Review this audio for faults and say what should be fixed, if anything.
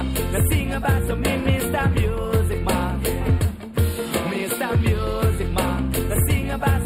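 Channel delay (comb filtering) runs throughout: one channel lags by roughly 0.07 ms before the mono sum, cutting a notch near 7 kHz and giving the top a hollow, phasey quality. To prevent it, align the channels' timing before summing to mono, or take a single channel.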